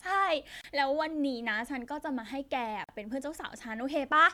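Twice the speech drops into a brief gap, from 0.61 to 0.64 s (about 28 ms) and from 2.84 to 2.89 s (about 45 ms), with softened edges, before resuming exactly where it stopped. These are gaps at a join of encoded pieces: the audio was encoded in separate pieces and joined untrimmed, so each piece's leading encoder delay and padded final frame remain as silence at the seams.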